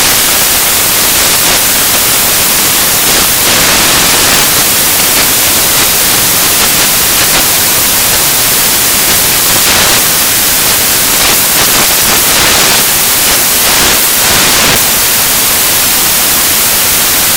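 Loud, dense noise, close to white on loud passages, fills the whole audio. The problem is samples built from the wrong bytes: the reader misassembles each sample, so the rapidly changing low bits become the dominant part of every value.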